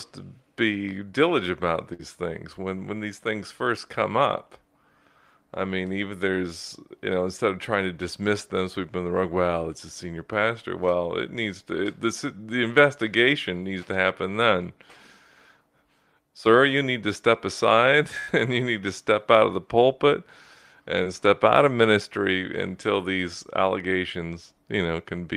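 At 1.93 to 2.01 s, after "to be diligent about", and at 18.19 to 18.29 s, after "need to step aside", bursts of packet loss occur. The decoder extends the last sound for about 55 ms and 83 ms while fading it, then resumes at "things when when these" and "and you need to". About 60 ms and 80 ms of audio are skipped.

At 21.03 to 21.07 s, just before "step out of ministry", a short concealed packet loss drops about 20 ms. The gap is filled with roughly 23 ms of synthesised continuation, heard as a brief smear before the real signal blends back in.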